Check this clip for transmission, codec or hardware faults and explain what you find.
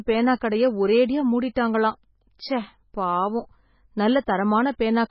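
Two faults are audible in this speech: heavy compression damage throughout, and a brief pre-echo just before one attack.

Throughout the clip the speech sounds watery and swirly, with nothing above about 5.5 kHz, so the s sounds turn dull and chirpy. The likely cause is MP3 compression at a very low bitrate, consistent with roughly 16 kbps. Short of bits, the encoder cuts the treble and lets weak frequency lines flicker on and off between frames.

At 2.38 s a short hiss of about 11 ms comes before an attack, softening its onset. This is pre-echo. The codec spreads quantisation noise across a whole block, so noise sized for the loud onset also fills the quiet moment just before it.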